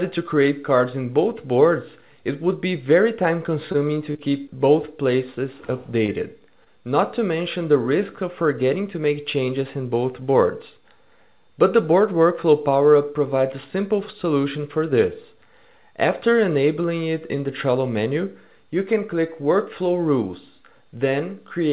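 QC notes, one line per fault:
3.72–3.76 s: short stall from a late packet. A packet arrived late and the jitter buffer ran empty. The last sound is held about 21 ms too long before playback resumes.
4.12–4.17 s, 6.06–6.10 s, 6.64–6.68 s: short concealed packet loss. About 20 ms never arrived each time. The receiver extended the preceding sound to fill the gap, leaving a brief smear.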